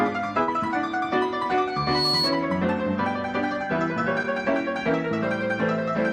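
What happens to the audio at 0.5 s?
Short concealed packet loss occurs from about 0.43 to 0.49 s, just before the 0.5 s mark. Roughly 40 ms of audio failed to reach the decoder in time, and the receiver patched the gap with about 43 ms of synthesised continuation built from the sound just before it, then crossfaded back into the real signal. The result is a brief smeared, wobbly blip where the original detail is missing.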